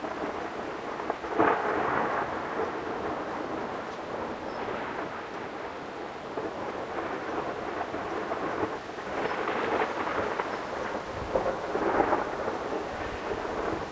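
Everyday sounds run twice as fast and a full octave high throughout, a wrong sample rate fault, which fits 8 kHz audio played back unconverted at 16 kHz.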